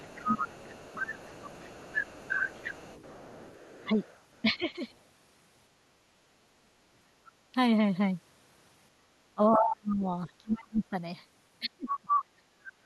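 This is a speech clip with two echo-cancellation faults. The other side's voice leaks through from the start to 4.41 s, about 10 dB below the talker. It returns from 11.89 to 12.2 s, now roughly as loud as the talker. The likely cause is a loudspeaker at the talker's end feeding the microphone, with the echo canceller leaving part of that playback in place.

Speech is also suppressed in double talk four times. From 0.21 to 1.88 s the talker dips by up to about 15 dB, for about a second in total. From 3.81 to 4.69 s the dips are shallower, around 10 dB, over less than half a second. From 9.35 to 10.96 s and from 11.63 to 12.85 s the talker drops by as much as about 35 dB, close to cutting out. That affects roughly one and a half seconds in the first span and one second in the second. Both sides were likely talking at once, and the canceller turned everything down.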